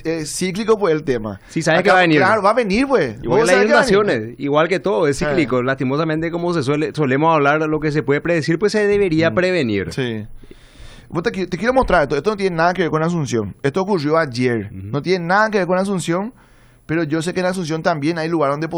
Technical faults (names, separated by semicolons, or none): none